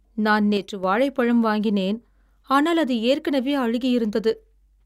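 From 0.57 to 0.84 s the speech abruptly drops by about 6 dB, a sudden quieter stretch lasting roughly a quarter of a second, before full level snaps back just ahead of "வாழைப்பழம் வாங்கினேன் ஆனால் அது". The cause is likely one channel dropping out: with one side of the stereo signal missing, the mono sum carries only half of the shared material, and anything present solely in the lost channel vanishes for that span.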